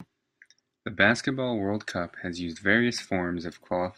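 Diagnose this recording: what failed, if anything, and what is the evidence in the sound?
Nothing in the signal chain seems to have gone wrong here; the speech comes across steady and intact, with nothing I can hear that points to a failed stage anywhere along the way.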